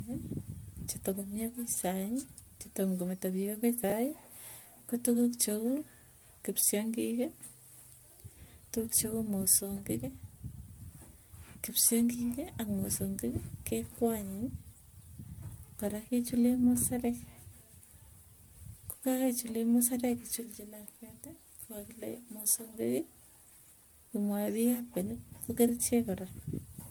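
Across the whole clip the speech sounds swirly, hollow and smeared, with consonant attacks blurred, even though the top end still reaches 20 kHz. This is likely generation loss, pointing to a 128 kbit/s MP3 chain repeated around seven times, each pass adding fresh quantisation damage.

From 3.84 to 3.92 s there is a brief jumbled moment. This is chunks out of order: a 20 ms piece of audio plays late, after material meant to follow it, which fits it arriving about three chunks behind. Nothing is missing, only misplaced.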